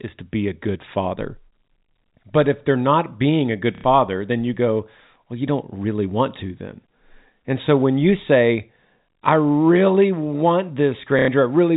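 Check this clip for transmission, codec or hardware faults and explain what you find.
Two short dropouts, both the same kind: packet loss with the last packet repeated. They hit at 3.75 to 3.84 s and again at 11.19 to 11.28 s, each about 90 ms, which fits three 30 ms packets going missing. The receiver fills each gap by replaying the last good packet. Those loops don't line up with the speech's pitch, so the run buzzes for a moment, giving a brief robotic stutter. Underneath, the G.711 telephone coding is audible only as the usual band limit at 4 kHz.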